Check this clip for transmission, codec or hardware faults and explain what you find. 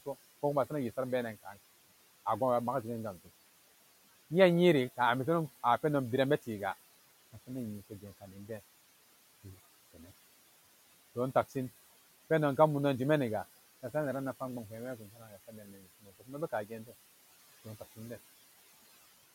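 Two related faults, both from a noise suppressor working on the room noise, which sits about 19 dB under the speech.

Noise suppressor artifacts run the whole clip. The suppressor pulls the background down by about 16 dB between phrases, so the residue pumps.

Speech cut by the noise suppressor shows up at 8.21–8.5 s, 14.98–15.82 s, 16.01–16.31 s and 16.52–16.93 s. It mistakes quiet speech for noise and ducks it by about 9 to 17 dB, so the affected speech sounds swallowed or faint.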